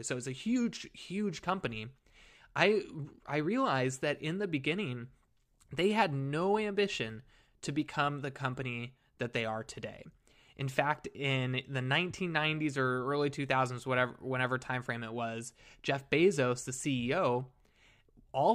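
No technical faults are audible anywhere in the recording.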